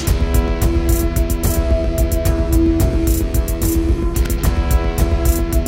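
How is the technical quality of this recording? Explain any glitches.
The recording has one glitch. At 4.26 s, an electrical switching spike, likely a nearby switch or motor arcing into the audio line, adds a sharp snap peaking around -10 dBFS.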